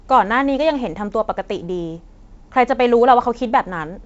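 No technical faults are present in the speech. It arrives through G.722 wideband telephone coding at 56 kbit/s, so nothing is heard above 7.7 kHz, and the coder leaves a light hiss and slight graininess.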